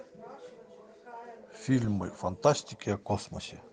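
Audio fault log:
Nothing to log here; the speech comes through without any technical trouble to report.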